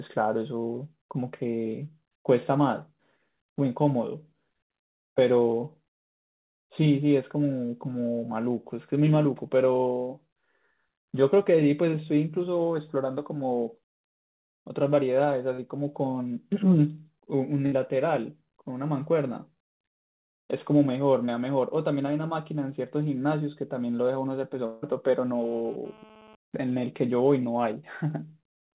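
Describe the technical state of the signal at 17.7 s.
At 17.7 s the speech stops advancing for a moment: the last sound is held and faded out for about 57 ms, then the talk resumes a little further on, with roughly 60 ms of it simply gone. This is a burst of packet loss between 17.66 and 17.74 s. Packets arrived too late or not at all, so the receiver concealed the gap by extending and fading the preceding audio. The G.711 mu-law path stays narrowband throughout, with nothing above 4 kHz.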